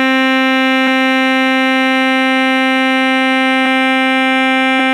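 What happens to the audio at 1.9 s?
Nothing goes wrong at 1.9 s; the music continues intact through that moment.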